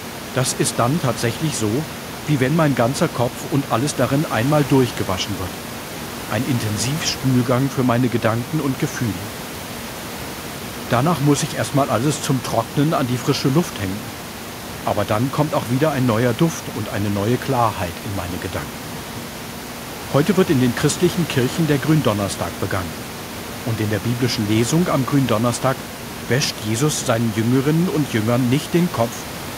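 Nothing stood out as a technical fault on listening to this speech recording, and the only thing heard under the speech was the room's own background noise picked up by the microphone.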